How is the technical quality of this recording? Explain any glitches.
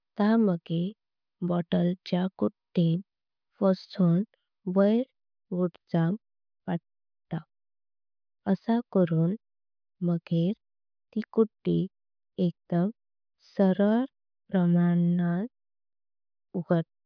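Technical quality checks out, with no faults audible anywhere in the recording and nothing to explain.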